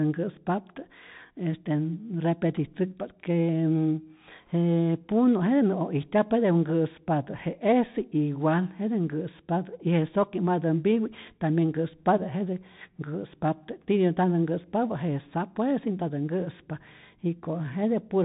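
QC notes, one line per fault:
Throughout, Bluetooth CVSD headset codec: the speech sounds boxed-in and narrow, with nothing above 4 kHz, scratchy s sounds and a granular hiss underneath. Loud bright passages turn gritty because the one-bit up/down steps, consistent with a 64 kbps link, cannot keep pace.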